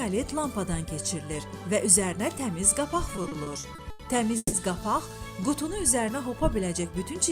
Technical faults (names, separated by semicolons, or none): repeated stalls (stutter); call audio freeze